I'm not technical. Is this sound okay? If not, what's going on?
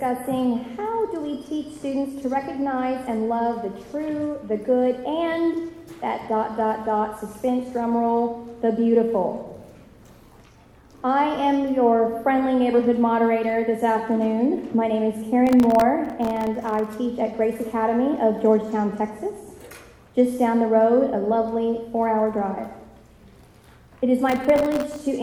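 No. There are two bursts of processor overload crackle, from 15.47 to 16.87 s and from 24.29 to 24.98 s. The computer fell behind on dozens of very short audio chunks. Each missed chunk became a tiny gap of silence, heard together as gritty crackling.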